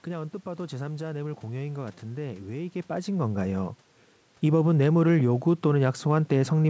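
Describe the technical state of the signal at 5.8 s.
At 5.8 s the audio is intact, with no fault present at that moment.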